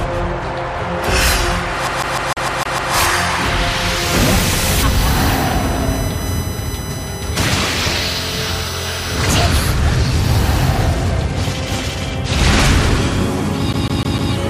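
From 1.87 to 2.94 s the player gets a CD stuck on one turn: a scratch keeps knocking the laser back a track, so the same 0.15 s slice of sound replays seven times, each jump marked by a tiny mute. That's the quick, even stutter of a skipping disc. It happens again near the end, from 13.73 to 14.33 s, with the same 0.15 s loop looping four times.

Between them, from 4.29 to 9.47 s, there's USB whine. The bus's 1 ms frame timing is bleeding in through power or ground, giving a steady 1 kHz whine. The loudest part is its sixth harmonic at 6 kHz, so it comes across as a thin, high, fixed-pitch whistle sitting roughly 15 dB under the sound.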